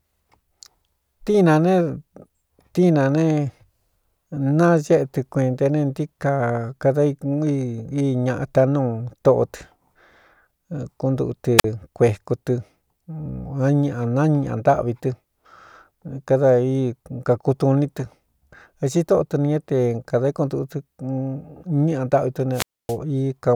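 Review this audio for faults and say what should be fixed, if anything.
Wireless microphone squelch dropout at 11.58–11.64 s, just before "kueku tɨ", and at 22.52–22.97 s: fading radio signal trips receiver squelch, muting output about 45 ms, then about 267 ms. Prevent it with better antenna placement, line of sight and a clear frequency.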